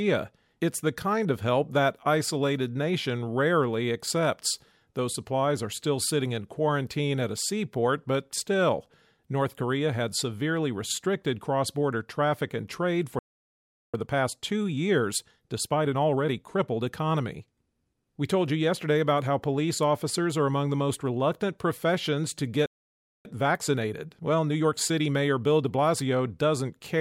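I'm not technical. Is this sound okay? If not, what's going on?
No. There is a playback stall at 13.19 s, right after "border traffic and trade": the speech goes silent for about 0.75 s, and again at 22.66 s for about 0.59 s. The player likely ran short of incoming data and had nothing to play until it caught up.

A time-compressed catch-up follows each gap, from 13.94 to 16.94 s at 1.15 times normal speed, and from 23.25 to 26.25 s, after "most reluctant professions to", at 1.1 times. The player trims tiny slices to recover lost time, so the speech sounds hurried, though the pitch stays the same.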